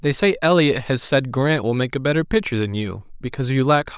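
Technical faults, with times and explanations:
No technical faults detected.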